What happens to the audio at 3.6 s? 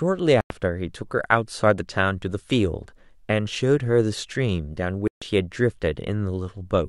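Nothing goes wrong at 3.6 s; the speech runs through that moment with no dropout, click, distortion or other audible fault.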